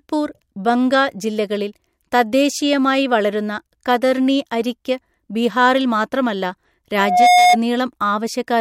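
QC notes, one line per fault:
6.98–7.57 s, loudspeaker feedback squeal: a 723 Hz tone swells over about a third of a second to roughly 5 dB above the speech, as mic-to-speaker loop gain exceeds one.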